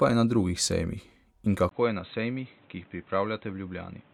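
Input switched to a poorer device, the likely cause, from 1.69 s to the end: after a 20 ms silence, nothing above 4 kHz remains, so the speech turns dull and boxy, roughly 10 dB quieter, over new background noise about 30 dB below it.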